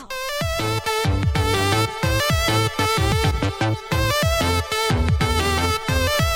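At 0.84 s, 2.2 s and 3.12 s the audio jumps forward by roughly 40 ms each time, with no gap. That points to a likely dropped buffer (overrun): samples overwritten before being read. A dropout would leave silence instead.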